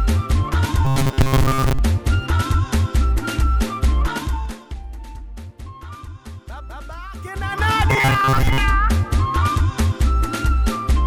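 From 0.85 to 1.79 s, new audio is likely arriving too seldom, so the playback keeps repeating a short buffer of roughly 7.5 ms while most of the real material is skipped. This is robotic sound from repeated short buffers. The repeats impose a fixed buzz at 134 Hz, so the sound becomes a hard, metallic drone that only loosely tracks what it replaces.

From 4.09 to 4.83 s, a level drop of roughly 15 dB is applied in unsmoothed 2 dB jumps, about ten a second. Each jump puts a small discontinuity in the waveform, and together they make zipper noise, a ticking texture riding on the sound as it fades. From 7.15 to 7.71 s, the level climbs back by a similar amount in 3 dB steps at the same rate, with coarser ticks.

From 7.91 to 8.58 s, the same robotic 134 Hz buzz returns. It again points to starved buffers being looped in place of the skipped audio.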